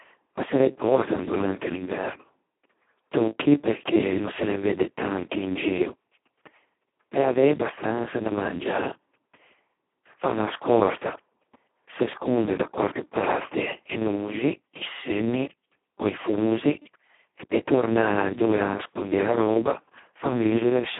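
From start to finish the speech carries heavy Speex codec damage. The sound points to Speex at its lowest setting, which fits a bitrate near 2 kbps. At that rate almost no bits go to the excitation, so the codec acts close to a vocoder. The speech sounds hoarse, buzzy and robotic. The band runs from about 150 Hz to 3.4 kHz, like a phone line. Nothing is heard above 3.8 kHz, so sibilants sound dull.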